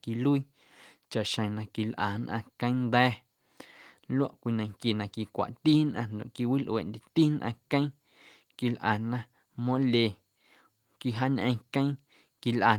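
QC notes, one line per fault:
Nothing to flag here, as no faults turn up anywhere in the speech.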